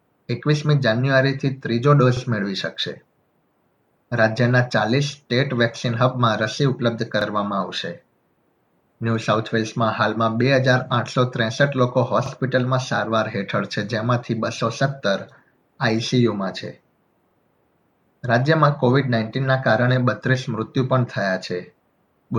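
At 2.17, 7.21, 12.26 and 17.31 s, a click or stutter marks each join of overlapping chunks. The audio was handled in 5-second blocks, and each new block restarts about 48 ms before the previous one finished, so that short stretch plays twice. On a waveform, the same 48 ms shape appears twice back to back, often with a step at the seam. A spectrogram shows a thin vertical line and a brief repeated slice at each join, roughly every 5 seconds.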